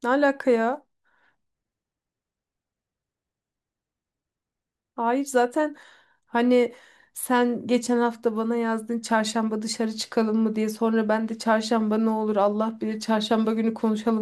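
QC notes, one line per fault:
Nothing to flag on this speech recording; I heard no problems anywhere in it.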